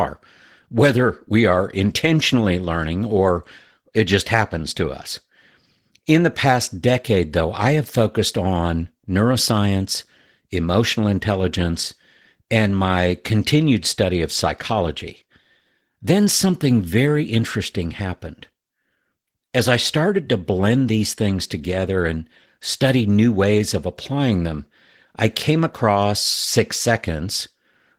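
From start to finish the speech passes through Opus voice compression at a low bitrate. The sound fits roughly 16 kbps in hybrid mode: a linear-prediction layer carries the band up to 8 kHz and a transform layer thinly covers the full band above it, refreshed in 20 ms frames. With so few bits, the excitation is coded coarsely. The damage is plainly audible as a muffled, hoarse, faintly robotic voice.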